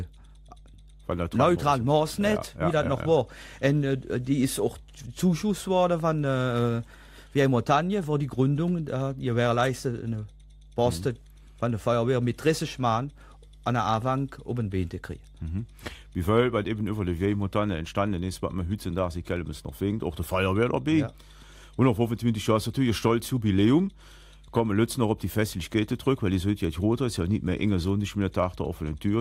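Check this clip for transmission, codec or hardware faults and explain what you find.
A steady mains hum runs through the whole clip, from the first second to the last. It sits at 50 Hz with some energy at low harmonics, and it is strong: somewhere around 25 dB below the wanted sound, so it stays clearly audible under it. The hum comes from power-line current getting into the signal path, typically through a ground loop between connected equipment or magnetic pickup from a nearby transformer. It sounds like a constant low drone.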